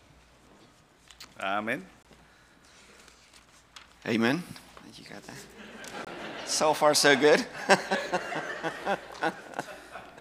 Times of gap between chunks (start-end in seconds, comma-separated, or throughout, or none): 2.03-2.05, 6.05-6.07